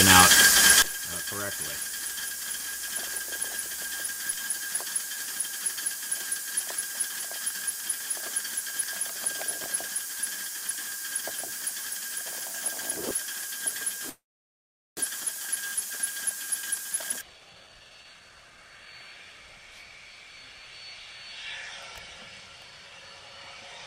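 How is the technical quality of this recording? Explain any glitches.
The recording has three clear faults: a polarity problem that runs through nearly all of it, a stall in mid-clip, and a short burst of hurried playback just afterwards.

One channel inverted, from 0.82 s to the end: the most likely cause is that one stereo channel has its polarity flipped. When the two channels are combined to mono, whatever they share cancels, so the level drops by about 16 dB. The centre of the image nearly disappears, and what remains is only the difference between left and right.

Call audio freeze, from 14.09 s to 14.99 s: the likely cause is packets held up in transit that left the receiver's jitter buffer empty. The receiver stretched the last sound into a fading tail, and about 780 ms of that span is silent. When delivery resumed, playback carried on from where it stopped. Nothing was lost, but a gap of about 875 ms was inserted and the timeline shifted later by that amount.

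Jitter buffer speed-up, from 16.56 s to 18.93 s: after the stall, the receiver had too much audio queued. To catch up it repeatedly cut out tiny pitch-period slices, removing about a second in total. Playback runs at roughly 137% speed while the pitch stays the same, so this stretch sounds rushed.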